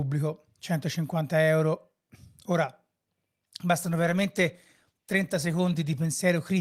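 From 3.87 to 6.17 s a call bitrate drop makes the speech rough and muffled, consistent with roughly 22 kbps coding; the spectrogram's upper band abruptly goes empty.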